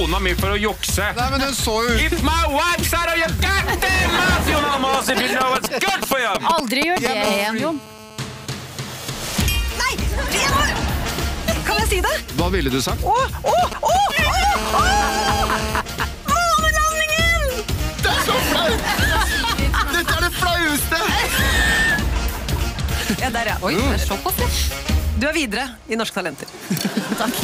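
From 4.94 to 7.07 s and again from 13.48 to 14.44 s, GSM signalling bursts gallop in as dit-dit ticks and short 216.7 Hz buzzes, near the sound's level, then slightly below. A nearby 2G phone's radio pulses are being rectified. From 7.24 to 8.46 s (about −11 dB) and 14.56 to 15.80 s (about −6 dB), a GSM phone buzz follows: the same 216.7 Hz rasp, but steady and unbroken, as during a call.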